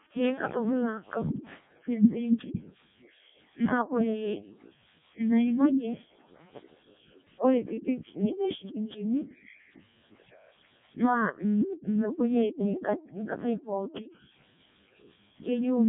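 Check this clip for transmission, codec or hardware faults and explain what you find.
The speech has passed through a Codec 2 vocoder, and the damage is heavy. It runs the whole way through. Codec 2 does not keep the waveform. It sends only pitch, voicing, energy and a rough spectral envelope, and the decoder rebuilds the voice from sine waves. The result is robotic and buzzy. The coarseness fits the lowest mode, around 700 bit/s. Nothing remains above 3.8 kHz, so the sound is dull and narrow.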